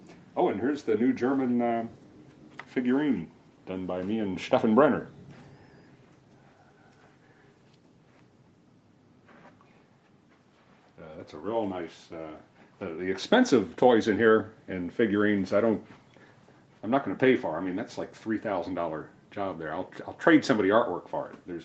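No faults: the audio carries only the expected marks of call microphone processing and a WebRTC call path, with content stopping at 8 kHz.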